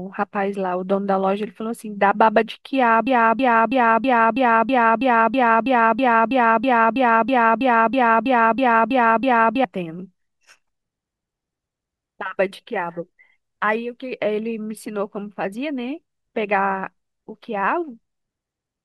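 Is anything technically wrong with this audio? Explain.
Yes. From 3.07 to 9.64 s the speech falls into a broken-record loop: a 0.32 s fragment repeats exactly, back to back, about 20 times. The likely cause is a stalled player or stream resending its last buffered fragment, so the intended audio for that span is lost.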